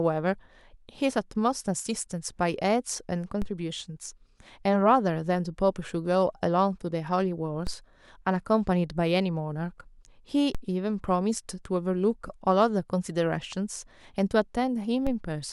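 At 3.42, 7.67, 10.55 and 15.07 s the speech carries a DC step. The waveform's zero line jumps by about -22 to -21 dBFS and drains away through a 5 Hz high-pass, giving a low thump. Unlike a dropout click, the speech itself continues unbroken.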